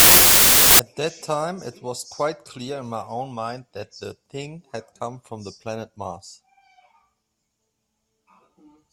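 From 0.0 to 0.79 s the speech sits under loud, harsh noise. This is a wrong sample width fault. Audio stored as 32-bit integers is being read as packed 24-bit samples. The byte boundaries no longer line up, so most values mix bytes from neighbouring samples. Only some keep the signal's top bits. It also plays at 0.75 times speed, so it drags and sits lower in pitch.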